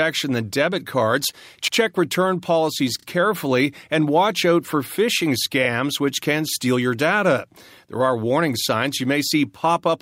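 Repeated frames stutter the speech twice. At 1.68–1.78 s, after "than debit cards", a 96 ms block replays once. At 2.99–3.06 s, after "return policies", a 32 ms block plays two extra times, adding 64 ms.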